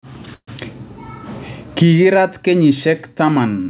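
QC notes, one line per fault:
0.34–0.49 s, call audio freeze: the sound smears into a brief fading buzz, drops to 70 ms of near silence, then picks up where it stopped, now 134 ms later. Packets were likely held up, emptying the jitter buffer; nothing is lost.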